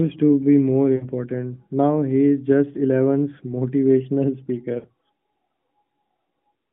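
Lost AMR speech frames at 0.96 to 1.08 s, just after "to be more", and 4.80 to 4.88 s: in this narrowband mobile speech, the decoder stretches the last good sound and fades it, giving gaps of 60 and 40 ms that fit three and two lost 20 ms frames.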